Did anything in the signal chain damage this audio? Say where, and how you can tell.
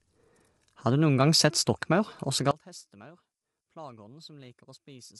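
Yes. Throughout the speech the voice sounds rough and grainy, with noise filling the gaps between harmonics and nothing above 11.7 kHz. This is codec-stage damage, likely from low-delay AAC compression (AAC-ELD). Its short frames resolve pitch harmonics poorly, and at a rate that fits about 32 kbps the encoder cannot spend enough bits on them. A plain low-pass filter would cut the top band cleanly but leave no graininess between the harmonics.

From 2.51 s, right after "gang sett stokkmaur også", to the end, the voice collapses by about 25 dB into a faint residue. The likely cause is one channel inverted in the wiring or a channel-handling stage. With one stereo channel's polarity reversed, summing to mono cancels the centred voice and leaves only the small difference between the channels. A dropout or gain fault would silence or scale the sound evenly, not leave this faint remnant.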